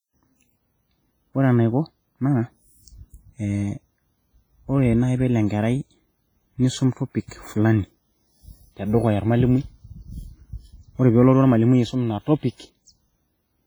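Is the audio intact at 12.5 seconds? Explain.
No. At 12.5 seconds the speech carries the same damage heard across the whole clip: a ringing, washy smear with a hiss that swells and fades along with the voice. This is likely WMA compression. A transform codec coding long blocks spreads its quantisation noise over tens of milliseconds, and at a rate that sounds near 24 kbps it discards weak spectral detail outright. Unlike steady background hiss, this noise breathes with the signal and disappears in the gaps.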